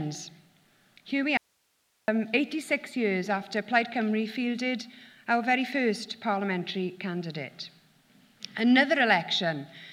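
An audio dropout to a faint residue runs from 1.37 to 2.08 s: the sound cuts off abruptly for about 0.7 s, leaving only hiss roughly 45 dB below the signal. The wanted signal was likely lost upstream while the path after the break stayed live.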